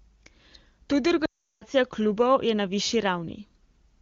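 From 1.25 to 1.64 s the speech fades quickly to silence, then returns weakly: lost AMR speech frames, the wideband decoder concealing about 0.36 s of corrupted data.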